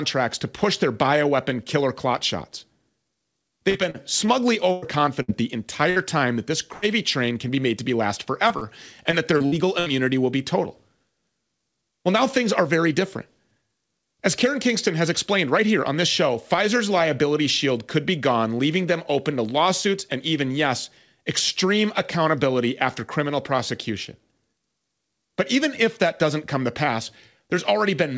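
From 3.70 to 5.30 s, repeated packet loss (robotic sound): five gaps, the longest 100 ms, covering about 16% of the stretch. Each hole is filled by extending the previous sound, so the audio turns choppy with pieces missing. On a spectrogram, the harmonics flatten into short, smeared, repeated blocks.

A burst of packet loss at 5.90 s, just before "time that this", and another at 6.74–6.84 s, between "time that this" and "train can be made", cut out about 60 and 80 ms. Each gap is bridged by a fading held buzz or hiss, visible as a steady, decaying band where the waveform's detail disappears.

From 8.48 to 9.88 s, after "made to be last" and before "will be total", the robotic chop returns with six gaps, the longest 61 ms and about 15% concealed. Across the clip, the call path's spectrum stops at 8 kHz, which fits G.722 at 64 kbps.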